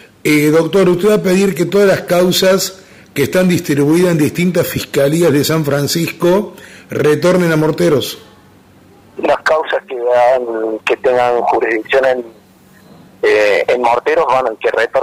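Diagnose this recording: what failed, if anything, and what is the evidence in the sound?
No fault detected anywhere.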